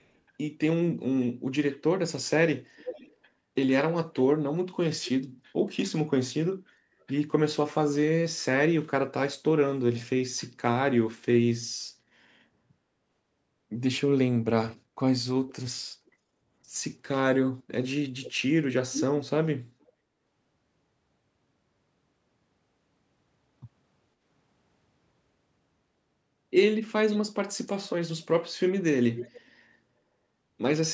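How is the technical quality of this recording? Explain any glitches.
The speech has a recurring echo leak. At 0.0–0.09, 2.76–3.15, 15.48–16.11, 18.24–19.9 and 27.11–29.6 s, a delayed copy of the voice returns 438 to 488 ms late. The likely cause is a far-end echo canceller letting its loudspeaker's sound back through the microphone. The copy ranges from barely audible at the start to nearly as loud as the speech around 18 s. Unlike room reverberation, it is a separate repeat after a clear gap, not a smooth decaying tail.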